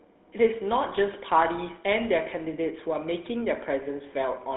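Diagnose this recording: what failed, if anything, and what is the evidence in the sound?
The codec's the culprit here: a GSM full-rate codec across the whole clip. The speech has a plainly audible buzzy, gravelly grain, sits in a 200 Hz to 3.6 kHz phone band with nothing above 3.9 kHz, and fits 13 kbps. The coder fakes the vocal tract and drives it with coarse, evenly spaced pulses.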